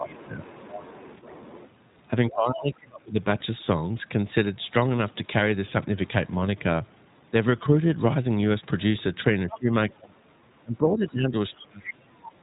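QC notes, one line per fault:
Throughout: iLBC codec. You'll hear nothing above 4 kHz, so the speech is boxy and telephone-like, with a clearly audible rough, slightly synthetic edge. Each short frame has its excitation coded independently, and that coarseness is what roughens the voice. The grain fits the 15.2 kbps, 20 ms frame mode. The damage is plain and steady across the whole clip.
0.00–0.61 s, 2.28–3.20 s, 9.46–11.36 s, 11.58–12.10 s: speech suppressed in double talk. The talker's level sags while the far end is active, by about 15 dB in the first stretch, about 30 dB in the second, about 25 dB across the long one near the end and about 35 dB in the last. Likely cause: the echo canceller couldn't tell the talker from loudspeaker echo and ducked everything.
0.42–1.70 s, 9.50–9.58 s, 12.25–12.29 s: other side's voice leaking through. A second voice sits under the talker. It's about 25 dB down in the longer first stretch, then brief scraps about 15 dB and about 20 dB down later. 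Likely cause: the device's loudspeaker output reaching the mic and the echo canceller not fully scrubbing it.
4.98 s, 10.04–10.07 s: lost iLBC frames. Each dropout is one 20 ms frame, heard as a tiny held, slightly buzzy vowel blip where the decoder repeated the last pitch cycle with a bit of noise mixed in. Because iLBC frames don't depend on each other, the voice snaps back right after both blips.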